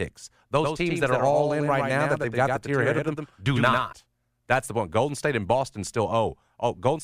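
From 0.63 s to 3.93 s the speech carries a doubled audio track: a second, full-band copy trailing by about a tenth of a second, some 5 dB down, with no decay or room colour, switching on and off abruptly. Likely a second capture path or misaligned edit.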